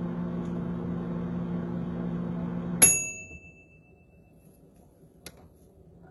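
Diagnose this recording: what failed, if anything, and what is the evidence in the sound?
The failure sits at the codec stage: throughout, the upper band is bright but rough and metallic, with nothing above 11.8 kHz. This points to heavy HE-AAC compression, likely at around 16 kbps, where spectral band replication copies lower bands upward, so the treble harmonics no longer align.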